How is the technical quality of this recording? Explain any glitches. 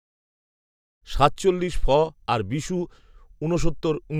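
No glitches or faults heard.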